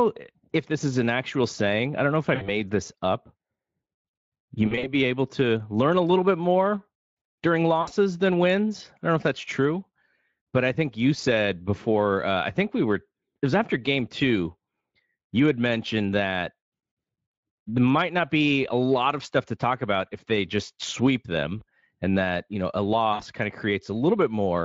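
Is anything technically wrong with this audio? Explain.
Yes. The speech has VoIP packet loss concealed by the speech codec. Packets failed to arrive, so the Speex decoder, whose coding damage is light, rebuilt the gaps from its last pitch and filter state at a falling gain. This happens at 2.35–2.52 s, 4.67–4.93 s (scattered across about 160 ms), 7.81–7.92 s before "than wins I don't", 21.59–21.63 s after "they just sweep them", and 23.13–23.22 s after "that you know a". Each gap turns briefly buzzy or hazy and fades, and the sound stays thin a moment after packets resume.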